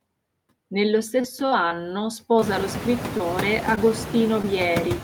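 Speech runs throughout, with noise suppressor artifacts across the whole clip: the suppressor pulls down bands it judges to be steady noise by about 18 dB, frame by frame, so the background dips in pauses and swells back under the voice. That constant pumping, tied to speech on and off, sets it apart from the network faults, which strike at specific moments. It becomes more noticeable after the room noise itself rises by about 22 dB around 2.5 s to sit about 8 dB below the speech. Between 1.21 and 1.73 s there is repeated packet loss with robotic sound: four separate holes, the longest 22 ms, together around 60 ms of missing audio, each bridged by extending the preceding sound. Because the patches come one after another, the passage turns choppy instead of showing a single isolated blip. Right after, from 1.75 to 2.34 s, a jitter buffer slow-down stretches the audio by 51 ms, running it at about 92% speed with the pitch unchanged. 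Syllables sound drawn out, but nothing is missing, which is what distinguishes it from loss concealment. Short concealed packet loss then appears four times, at 2.40 to 2.43 s, 3.17 to 3.21 s, 3.75 to 3.91 s and 4.42 to 4.45 s, each a 20 ms hole filled from the preceding sound and blended back. Each is a lone, brief smear or wobble rather than a run of chopping, and the one near 3.8 s also adds a little extra time.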